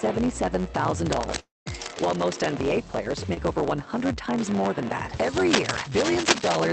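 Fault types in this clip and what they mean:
Block size mismatch (truncated): One stage writes longer blocks than the next reads, which fits a 512-sample write block, and each block's tail is discarded. Throughout, this leaves a buzz near 92 Hz and makes the audio run about 1.07 times fast, at roughly normal pitch.
Cable scratch noise: A worn cable, connector or control was likely moved, making its contact resistance jump about. Dense, ragged scratching lies over the sound from 1.06 to 2.53 s and again from 5.37 to 6.67 s, almost as loud as the sound itself.
Long network dropout: Audio stopped arriving from 1.39 to 1.68 s, likely a network stall. The receiver stretches the last sound into a fading buzz or hiss, then about 0.18 s of silence follows. When the audio returns, roughly 0.26 s of it is gone.
Short concealed packet loss: About 20 ms of audio failed to reach the decoder in time at 3.34 s. 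The receiver bridged the gap with roughly 24 ms of continued sound, then blended back, leaving a brief smear or wobble at that point.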